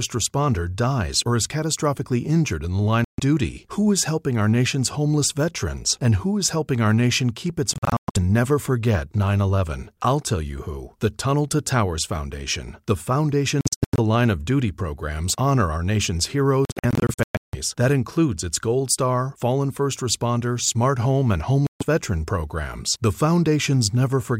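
Speech cuts to silence at 3.04–3.20, 7.73–8.17, 13.61–13.99, 16.65–17.55 and 21.67–21.83 s, the middle three as bursts of short gaps. Likely a Bluetooth dropout: sound resumes as though it kept playing, where a buffer stall would pick up where it stopped.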